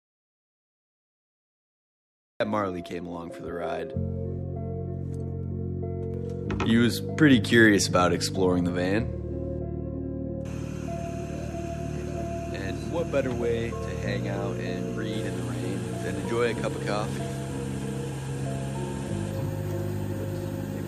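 The audio opens in an audio dropout to silence already under way, lasting until 2.40 s, most likely from lost input while recording continued. Unlike a quiet passage or gated pause, the gap holds silence with no room tone, and the sound enters abruptly mid-flow.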